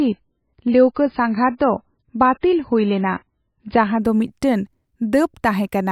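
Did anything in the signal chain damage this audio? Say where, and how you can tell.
Yes. From 0.0 to 4.0 s the speech sounds dull and watery, with nothing above 5.1 kHz, then brightens abruptly with no gap just before "ᱫᱚ ᱢᱤᱫᱴᱟᱝ". This is an adaptive stream starting at a low bitrate: playback opened on a thin MP3 version, about 17 kbit/s, then switched up to about 128 kbit/s.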